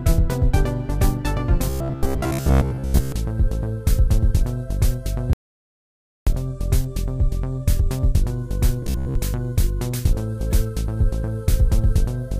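Robotic sound from repeated short buffers appears from 1.70 to 3.12 s and again from 8.82 to 9.15 s. In both stretches the audio collapses into a rigid, metallic buzz at 66.7 Hz that only loosely tracks the underlying sound. That pitch matches a roughly 15 ms chunk being replayed over and over, most likely because fresh audio arrived too slowly and the playback or capture path looped its last buffer. Much of the real material in those spans is skipped. An audio dropout to silence runs from 5.33 to 6.27 s, about 0.94 s. The sound stops abruptly into silence with no room tone, and then resumes mid-flow. This points to the input being lost while silence was written, likely from a brief disconnection or mute, and whatever occurred in that gap is gone.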